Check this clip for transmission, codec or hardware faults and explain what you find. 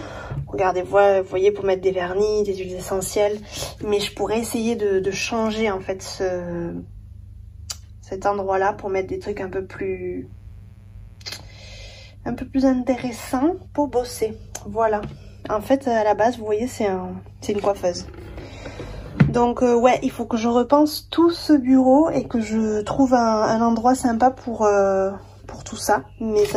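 There's one hardware fault: a burst of mains buzz from 10.24 to 11.74 s. Sharp switching spikes, twice per 60 Hz cycle, leak in through something like a dimmer or poor shielding, stacking harmonics into the kilohertz range. It's a raspy buzz sitting about 35 dB under the sound.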